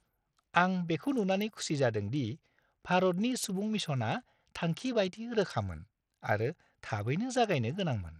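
A speech recording carries Bluetooth SBC compression damage from start to finish. The top end is thin and unsteady. High frequencies flicker in and out. A gritty, grainy noise sits on the sound, with aliasing edges. The likely cause is a starved SBC encoder. At a low bitrate, which fits roughly 80 kbps, the upper sub-bands receive few or no bits. The remaining bands are coarsely quantised, which produces the grit.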